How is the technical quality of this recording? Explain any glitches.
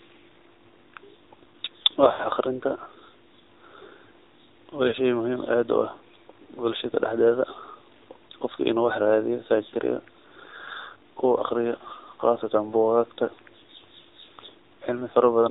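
The recording is limited by a narrowband mobile link, with two short glitches where speech frames dropped out.

AMR narrowband mobile codec, throughout: the speech went through AMR-NB, which samples at 8 kHz and rebuilds the voice from a vocal-tract model excited by a few pulses, so nothing above 4 kHz survives. The speech sounds muffled and plainly buzzy and synthetic, which fits a low mode of about 7.4 kbps. A spectrogram shows a hard ceiling at 4 kHz with empty space above.

Lost AMR speech frames, 2.08 to 2.28 s and 4.88 to 4.94 s: frames failed their radio checksum, and the decoder filled the gaps by repeating the last good pitch and vocal-tract settings at falling gain. In the first event, about 120 ms of losses are scattered over 160 ms, with a longest run of 80 ms. It sounds like a drawn-out, fading warble before the voice returns rough. The second is a 40 ms dip. A waveform shows the envelope sagging, and a spectrogram shows smeared, repeated harmonics.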